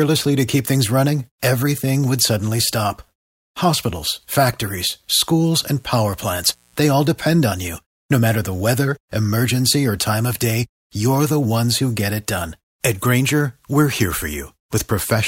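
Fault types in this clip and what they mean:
Mains buzz: interference locked to the 60 Hz mains supply, where sharp switching spikes leak in twice per cycle and spread into a ladder of harmonics. Here a faint, raspy buzz sits well below the speech from about 5.49 to 6.99 s, ending just before "depend on you". On a spectrogram it shows as evenly spaced horizontal lines at multiples of 60 Hz reaching into the kilohertz range; the waveform carries small spikes repeating 120 times a second.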